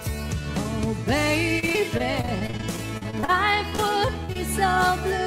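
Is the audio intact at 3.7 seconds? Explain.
No. Short concealed packet loss hits twice, from 3.70 to 3.74 s and from 3.76 to 3.80 s. Each time about 20 ms of audio arrived too late. The decoder extended the preceding sound to cover it, leaving a brief smear or wobble.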